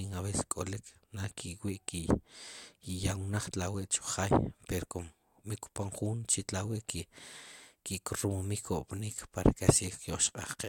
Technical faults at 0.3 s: none

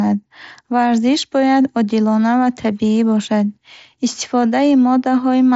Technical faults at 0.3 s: none

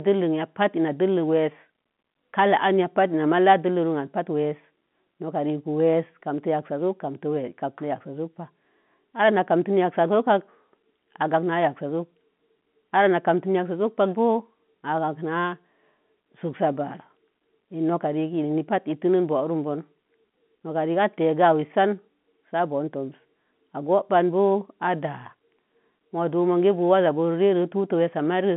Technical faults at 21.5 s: none

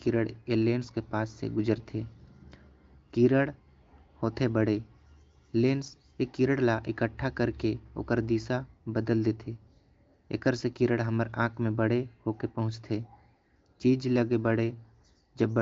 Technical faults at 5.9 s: none

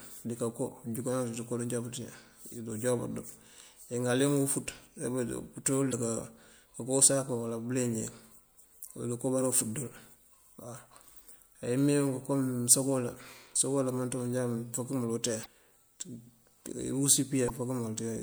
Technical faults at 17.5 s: damaged data in a compressed stream

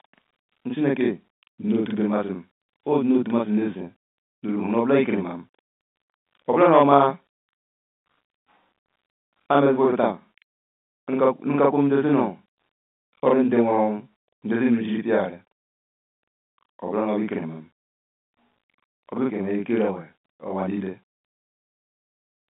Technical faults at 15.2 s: channel delay (doubling)

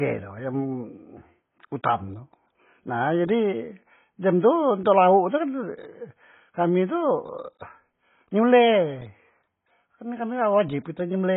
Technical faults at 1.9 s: AAC compression

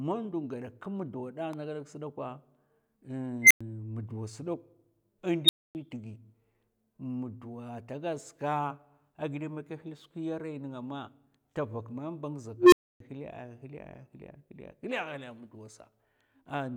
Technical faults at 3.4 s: unstable filter

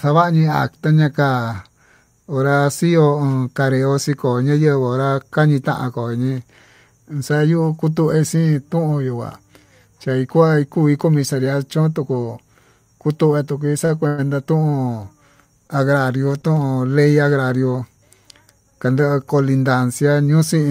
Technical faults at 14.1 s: call audio freeze

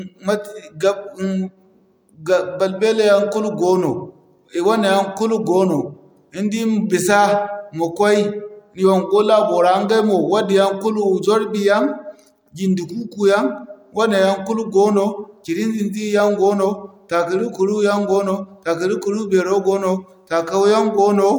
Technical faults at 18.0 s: none

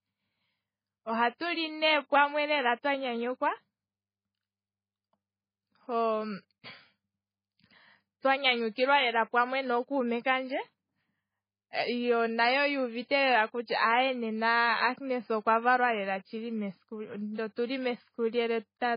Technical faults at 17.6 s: MP3 compression; pre-echo

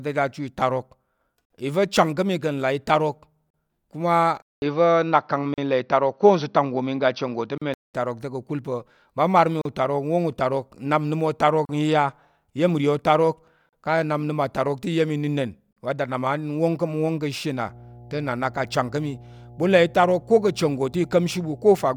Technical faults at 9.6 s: gap at a join of encoded pieces

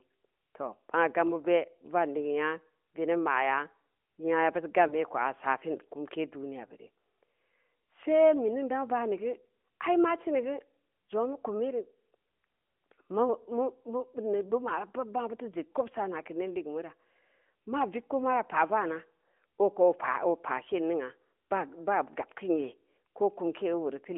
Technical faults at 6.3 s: none

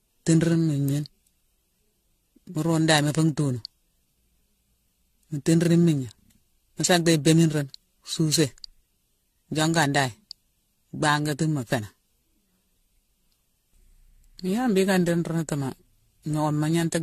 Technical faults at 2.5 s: generation loss

